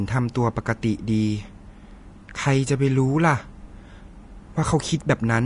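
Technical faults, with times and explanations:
Throughout: Vorbis compression, likely at a low setting around 34 kbps. Nothing remains above about 10.6 kHz, and the upper speech band is coarsely quantised, so fine treble detail turns into grainy, hissy noise and consonant attacks sound smeared rather than crisp.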